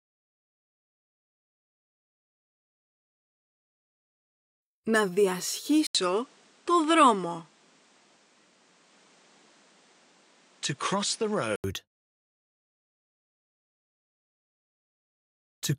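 At 5.87 s the sound drops out for 80 ms, then returns duller, with nothing above 10 kHz and a faint new background noise, at an unchanged level. The gap and fresh noise point to an input likely switched to a poorer device rather than a filter. Full bandwidth returns at 11.64 s.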